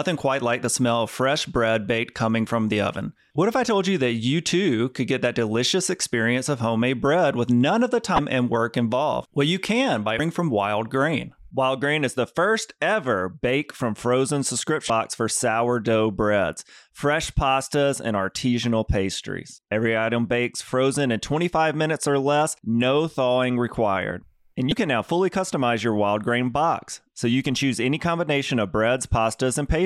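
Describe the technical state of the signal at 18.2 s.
At 18.2 s the speech signal is intact, with no audible technical fault at that moment.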